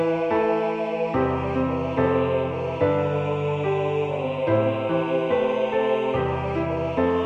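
No technical faults are audible anywhere in the recording.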